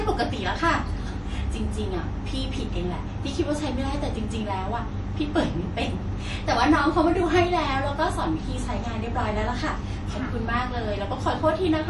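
MP3 compression artefacts run through the whole recording, plainly audible and likely from a low-bitrate encode; the damage fits something around 48 kbps. Nothing reaches above 11.5 kHz, where the encoder has cut the treble to save bits. Starved of data, it also drops weaker frequency lines, which flicker on and off between frames, so the speech takes on a watery, swirling texture, with metallic chirps on s sounds and smeared consonant attacks.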